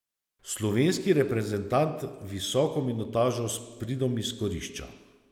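No technical faults are audible.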